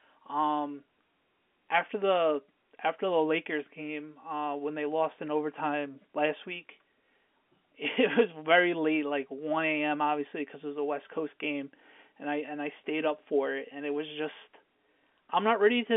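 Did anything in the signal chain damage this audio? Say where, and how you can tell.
No, nothing in the chain has damaged this speech; it just has the narrow 200 Hz to 3.5 kHz band you'd expect from an ordinary phone line.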